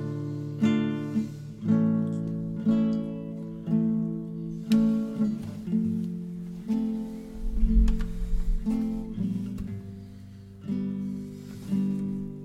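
No technical faults can be heard anywhere here.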